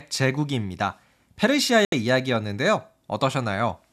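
Speech, with one digital broadcast dropout from 1.85 s to 1.93 s. The receiver muted after losing the signal or rejecting corrupted frames, so the audio cuts or fades out and resumes later. About 72 ms of programme is lost, which fits roughly three missing frames.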